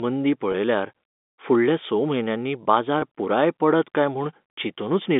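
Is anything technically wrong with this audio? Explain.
Yes. Two brief dropouts occur, at 0.52 to 0.54 s and at 3.00 to 3.02 s, and both show packet loss with pitch repetition. Each gap is about 20 ms, which fits a single lost packet. The receiver fills the hole by repeating the last pitch period. With such a short gap the patch sounds like a momentary held, slightly buzzy tone before the speech resumes. The audio is band-limited, as expected from G.711 telephone coding.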